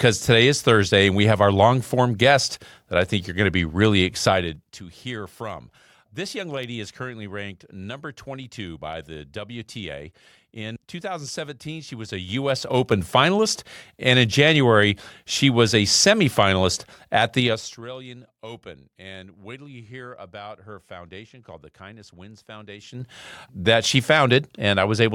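Level changes in this speech are applied in unsmoothed 3 dB jumps, causing zipper noise: each step clicks, so a ticking rides on the voice as it drops at 4.27–4.83 s and 17.37–17.83 s and rises at 11.98–13.00 s and 22.76–23.13 s.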